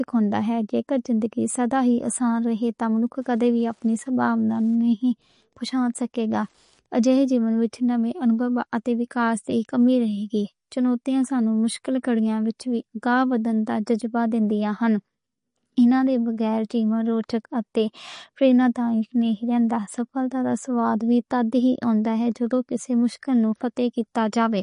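A watery, swirly quality runs through the whole of this speech recording, with s sounds turning chirpy and nothing heard above about 10.6 kHz. That is likely MP3 compression starved of bits, fitting a low bitrate around 40 kbps, where the encoder drops the treble and lets weak frequency lines flicker on and off. From 2.94 to 7.13 s a faint, steady ticking about ten times a second sits well below the speech, roughly 45 dB down. This is Wi-Fi interference, with the circuit picking up a nearby radio's beacon every 102.4 ms.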